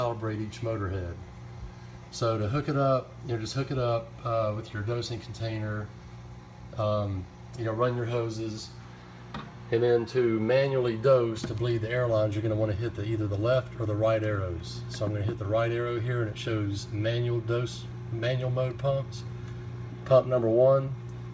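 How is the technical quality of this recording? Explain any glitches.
No glitches or technical faults can be heard here.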